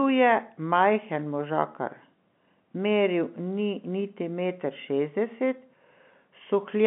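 No faults detected in this speech; the band runs from about 150 Hz to 3.5 kHz with nothing above 3.8 kHz, consistent with a G.711 mu-law telephone path at 64 kbps.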